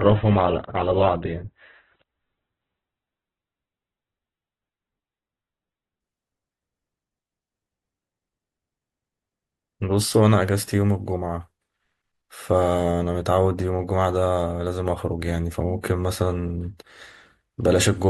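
Speech that opens as an adaptive stream starting at a low bitrate: nothing above 4.4 kHz until 6.0 s, consistent with roughly 8 kbit/s Opus, then full-band audio arrives suddenly with no gap, unlike a dropout or mid-stream downgrade.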